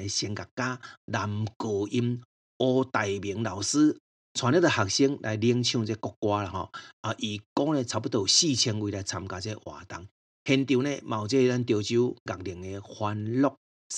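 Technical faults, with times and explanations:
Nothing in the speech stood out as a technical problem on listening.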